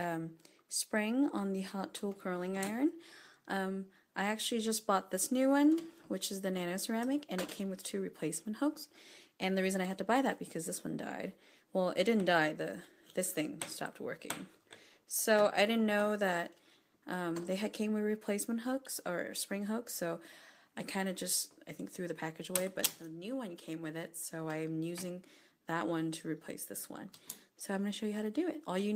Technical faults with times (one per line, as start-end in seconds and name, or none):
none